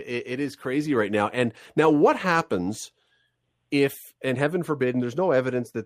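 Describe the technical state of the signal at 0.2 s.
At 0.2 s the speech signal is intact, with no fault present at that moment.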